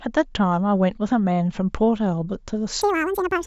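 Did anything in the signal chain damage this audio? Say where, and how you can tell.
Yes. A wrong sample rate affects the last part of the clip, from 2.82 s to 3.47 s. At 2.82 s the speech abruptly runs twice as fast and jumps a full octave, 12 semitones, higher. Speed and pitch rise together by exactly the same factor. That points to the playback or conversion stage clocking the samples out at double the intended rate without resampling, which fits 16 kHz material being played at 32 kHz.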